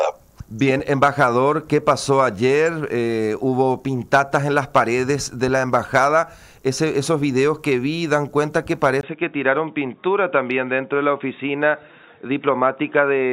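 At 9.01 s the input likely switched to a poorer device, and it stays there until the end at 13.32 s. After a 20 ms gap, nothing above 3.8 kHz remains, so the sound turns dull and boxy at much the same level, over faint new background noise.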